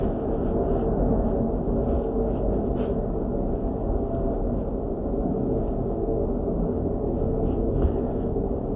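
Listening to this recording of sounds, nothing technically amiss stood out at any point.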